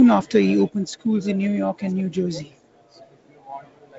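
Nothing stood out on listening to this speech, which comes through as G.722 wideband telephone audio with nothing above about 7.7 kHz.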